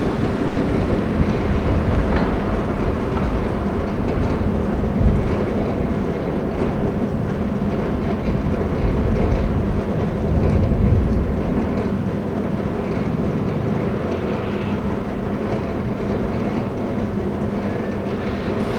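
At 0.47 to 0.58 s a packet arrived late and the jitter buffer ran dry, causing a short stall from a late packet. The receiver stretched the last sound for about 90 ms, then carried on where it left off, so nothing is lost but that sound hangs on unnaturally.

From 14.46 to 15.91 s the jitter buffer held more audio than its target, and a jitter buffer speed-up trimmed short pitch-period pieces repeatedly, roughly 70 ms in all. The sound plays about 4% fast at unchanged pitch.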